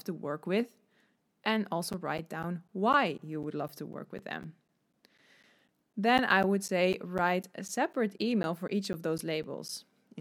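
From 1.93 s to 9.69 s the speech carries periodic USB or driver dropouts: every 0.25 s a blocked transfer loses roughly 10 ms, filled with silence, giving regular ticks. The waveform shows evenly spaced flat gaps; the spectrogram, thin vertical lines.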